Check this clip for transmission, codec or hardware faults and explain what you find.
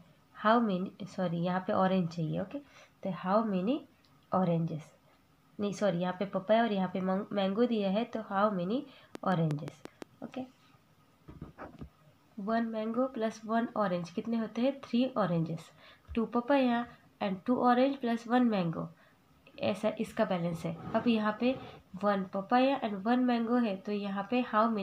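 There is one fault, a train of clicks from 9.15 to 10.03 s. A series of near-identical pulses at a steady 5.75 per second, around seven in all, rides on top of the audio and stands out well above it, at roughly 10 dB over the signal. Something outside the audio itself, likely electrical interference from nearby equipment or a faulty connection or power supply, is injecting these spikes. They are heard as an even ticking or popping laid over the sound for just under a second.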